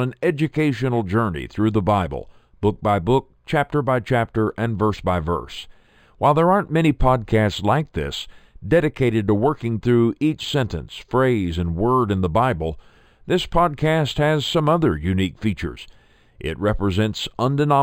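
Throughout the speech, sibilants carry a faint metallic shimmer and the top end sounds dulled. This is imaging from linear upsampling: straight-line interpolation from what sounds like an 11 kHz original left mirrored spectral copies between about 5.5 and 11 kHz, roughly 30 dB below the signal.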